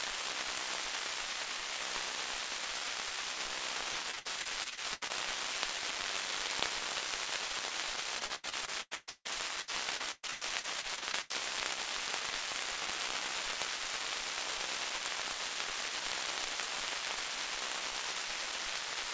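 Repeated packet loss (robotic sound) hits twice on this call path. From 3.92 to 5.11 s, packets go missing about a dozen times, the longest hole 82 ms, and roughly 30% of the stretch is patched by stretching the last sound, so it turns choppy. From 8.19 to 11.32 s it happens again, more often and with a gap up to 156 ms, leaving about a third concealed and the sound stuttering and robotic, all capped below 8 kHz.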